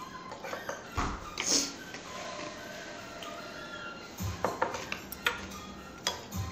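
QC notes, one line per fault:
No faults turned up anywhere in this one, so there's nothing to flag.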